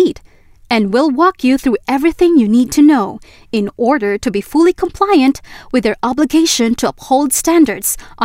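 From 0.15 s to 7.84 s there are word clock ticks: about twenty sharp clicks of uneven strength at a steady rate of roughly one every 0.4 s. The receiving clock runs free of the sender's, off by around 50 ppm, so each slip drops or repeats a single sample.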